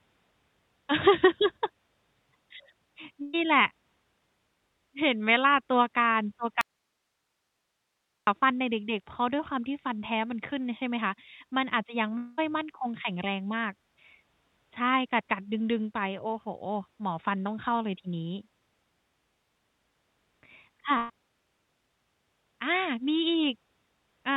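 At 3.22 s the speech stops for a moment and a brief fill of the last sound, fading as it goes, covers about 0.11 s before the talk resumes at 3.35 s, with roughly 120 ms of it skipped. This is a burst of packet loss: a short run of packets never arrived in time, so the receiver stretched the last sound and softened it until fresh audio came in.

From 6.61 s to 8.27 s the sound cuts out abruptly and, for about 1.66 s, only a faint hiss remains, around 50 dB below the speech, before it snaps back just as suddenly. That is an audio dropout to a faint residue. The hard edges and the live noise floor in the gap likely mean the signal feeding the path was interrupted while everything downstream kept running.

At 12.17 s a longer concealment sets in, a continuation of the last sound that fades over about 0.2 s, and the speech returns at 12.40 s with around 200 ms lost. This sounds like a long network dropout, likely a stall in delivery long enough that the receiver's fill-in ran thin before packets resumed.

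At 20.98 s a second burst of packet loss repeats the earlier pattern, with a fading fill of about 0.12 s, the same amount missing, and recovery at 21.11 s. Throughout, the call-codec band limit leaves nothing above 4 kHz, which fits G.711 mu-law at 64 kbps.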